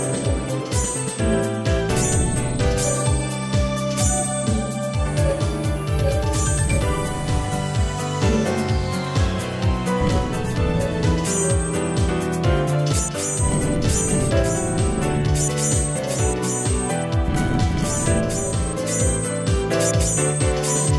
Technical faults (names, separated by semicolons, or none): none